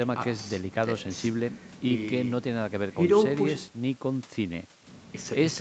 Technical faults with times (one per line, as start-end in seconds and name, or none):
none